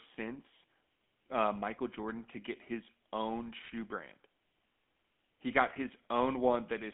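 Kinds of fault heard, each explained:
GSM full-rate codec: The whole clip has gone through the original GSM phone codec, which rebuilds speech from a vocal-tract model driven by a sparse, regularly spaced pulse train. The missing fine detail comes out as a plainly audible buzzy, gravelly roughness. The sound sits in a phone-line band of roughly 200 Hz to 3.5 kHz with nothing above 3.8 kHz, so it's dull and boxy, and the whole thing fits a 13 kbps rate.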